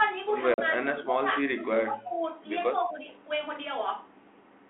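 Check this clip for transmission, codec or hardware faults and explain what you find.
Two faults are audible in this speech: a packet loss on an ADPCM call and repeated speech suppression during double talk, heard over a G.726 line at 32 kbit/s limited to 250 Hz to 3.4 kHz.

From 0.54 to 0.60 s, a 40 ms hole, about two packets' worth, breaks the audio with hard edges. The decoder's prediction and step size lose track of the sender's, so the speech resumes slightly distorted. That recovery transient separates it from a plain dropout.

Between 0.72 and 1.35 s, 1.54 and 2.34 s, and 2.78 and 3.08 s, the speech dips in pieces, by up to about 15 dB in the first two spans and about 10 dB in the third. The likely cause is an echo canceller mistaking far-end talk for echo and attenuating both. Unlike packet loss, these are soft, uneven dips rather than clean silent gaps.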